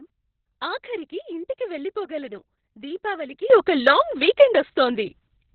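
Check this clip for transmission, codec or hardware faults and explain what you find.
Two faults are present. One runs through the whole clip and one starts partway.

Opus voice compression affects the entire speech clip. The sound is heavily damaged: muffled, hoarse and slightly robotic, with nothing above 6 kHz. That fits Opus in SILK mode at a very low rate, around 6 kbps. It coarsely codes the excitation of a linear-prediction model in long 60 ms frames.

A sudden gain jump happens at 3.50 s and lasts to the end. The level rises abruptly by about 12 dB. Speech and background noise step up together. The likely cause is a digital gain setting applied instantly, with no ramp.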